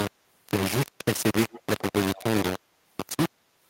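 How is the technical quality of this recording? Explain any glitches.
The recording is heavily degraded: a coarse grainy distortion runs through the whole clip, and faint repeats of the speech appear in its middle section.

Low bit depth without dither, throughout: the signal was likely quantised to very few levels, which fits roughly 3-bit rounding with no dither. Because the rounding error tracks the waveform, it is almost as loud as the speech itself. The result is a harsh, gritty buzz that shifts with every syllable, and quiet passages sputter or collapse toward silence.

Echo leak, at 1.5–1.61 s, 1.78–1.82 s and 2.15–2.24 s: one end was likely playing the call over a loudspeaker, and its echo canceller did not fully remove what its microphone picked up, so part of that sound was sent back. The leaked sound returns as a delayed copy trailing the speech by 118 ms. It is quiet, roughly 20 to 25 dB below the speech, and it is heard as brief scraps rather than a sustained echo.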